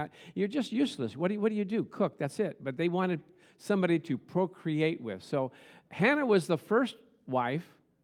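No technical faults can be heard anywhere in this speech recording.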